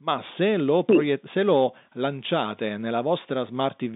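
No technical faults occur anywhere in this speech clip.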